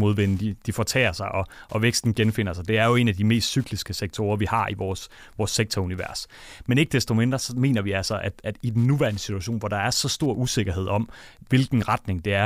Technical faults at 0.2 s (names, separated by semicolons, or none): Wi-Fi interference